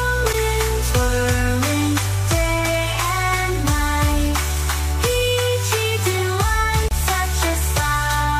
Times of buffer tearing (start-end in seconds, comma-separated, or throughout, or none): none